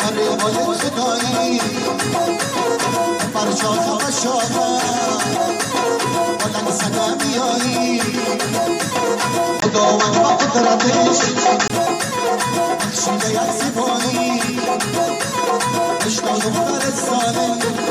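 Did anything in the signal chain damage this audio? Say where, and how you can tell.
Yes. At the capture stage, the input likely switched to a poorer device from 9.60 to 11.70 s. A brief 20 ms gap marks the switch, then the sound turns dull, with nothing above 7.6 kHz, a level shift of about 5 dB, and a faint new noise floor.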